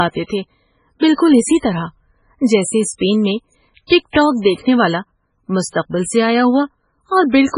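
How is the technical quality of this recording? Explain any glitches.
The quality is poor: heavy, likely MP3 compression damage runs throughout this speech. Nothing reaches above 10.5 kHz, and weak frequency lines flicker between frames, so it sounds watery and swirly rather than simply dull. That fits a very low bitrate, around 16 kbps.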